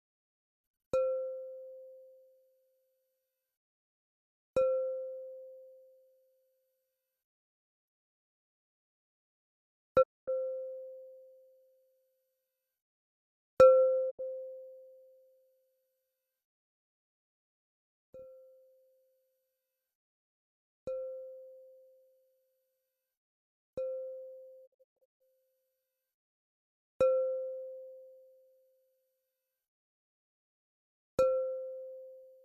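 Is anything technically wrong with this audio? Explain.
Yes. Digital broadcast dropout occurs three times: 10.01 to 10.29 s, 14.09 to 14.21 s, and 24.65 to 25.22 s. The receiver stopped getting usable frames, either through signal loss or checksum failures, and muted until valid data returned. Each gap fades to silence over about 20 ms. The first removes 240 ms of audio and the second 72 ms. The third breaks into several short holes, with 384 ms lost across 528 ms and the longest single gap 144 ms. Whatever was transmitted during these gaps is missing from the clip.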